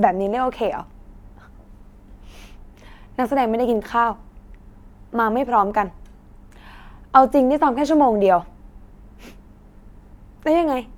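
Nothing goes wrong anywhere in this bit of speech, so there's no technical fault to point to at any moment.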